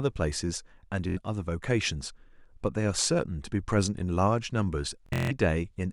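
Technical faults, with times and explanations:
1.09–1.18 s, Bluetooth stutter: about 70 ms of sound went missing, so the receiver replayed its last short slice as a brief buzz instead of silence. The sound then resumed further on, with that stretch skipped.
5.06–5.31 s, Bluetooth stutter: about 209 ms was lost in patches over 232 ms, with the longest run at 163 ms. This gives a machine-gun repeat rather than a clean silent dropout.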